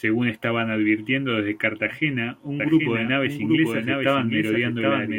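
From 2.60 s to the end, a doubled audio track appears: a full-band copy about 0.7 s late and roughly 5 dB quieter, likely from a second, slower capture path, shows as a shifted duplicate pattern on the spectrogram.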